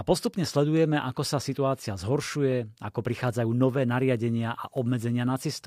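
A background task is stalling the USB bus or the audio driver at a fixed interval, causing periodic USB or driver dropouts in this speech recording. Every 0.25 s from 0.27 s to 5.53 s, a sliver of audio well under a millisecond long is skipped outright, with no silence put in its place. Each skip splices two mismatched points of the waveform together, so about twenty evenly spaced ticks sit on top of the speech.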